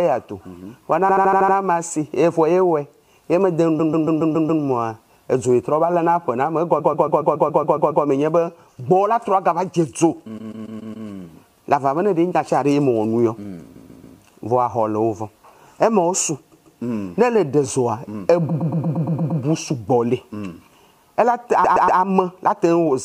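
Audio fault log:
1.08–1.55, 3.79–4.62, 6.79–8.04, 10.37–11.07, 13.75–14.17, 16.51–16.79, 18.48–19.41 and 21.63–21.99 s: repeated frames. A short block of compressed audio, about 0.14 s in most cases and 0.07 s in the first, plays again and again. Each bout adds 0.28–1.25 s of stutter.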